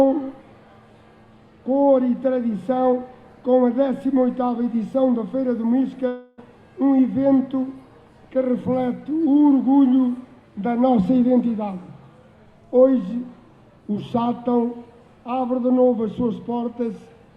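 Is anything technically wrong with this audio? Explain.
Yes. From 6.07 to 6.40 s the sound smears into a fading buzzy hiss for about 0.3 s, then resumes with that stretch gone. This is likely a long network dropout, with the receiver stretching the last received sound to cover the roughly 300 ms that never arrived.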